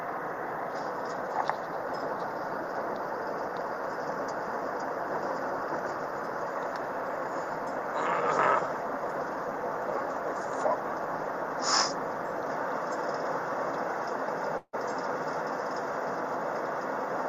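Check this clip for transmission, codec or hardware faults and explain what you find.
One fault stands out, near the end of the clip.

From about 14.57 s to 14.75 s there is what sounds like a long network dropout: the stream most likely stopped delivering audio for roughly 160 ms. The receiver bridged the gap by extending the last sound for about 155 ms as a fading buzzy tail, leaving around 50 ms of near-silence before the sound resumes, with that stretch simply gone.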